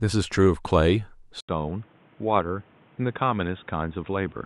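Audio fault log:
1.41–4.46 s, input switched to a poorer device. An 80 ms gap, then quieter, duller speech cut above 3.8 kHz. New faint noise appears. Likely a lesser microphone.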